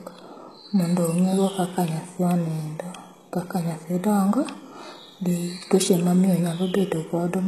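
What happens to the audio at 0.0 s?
From the very start and through the whole clip, the speech sounds plainly coded: sibilants come out gritty and metallic, and nothing is left above 12.3 kHz. This is likely HE-AAC compression at a low bitrate, roughly 16 kbps. The treble is not the original but is copied upward from lower bands and shaped coarsely, so its harmonics fail to line up.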